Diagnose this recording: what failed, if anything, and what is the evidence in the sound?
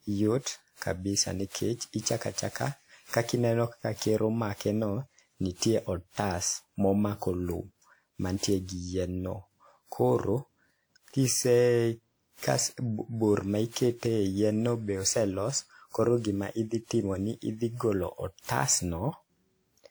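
Codec stage. Throughout, the speech sounds swirly and hollow, with blurred attacks despite full bandwidth. Likely generation loss: around ten lossy re-encodes piling up noise.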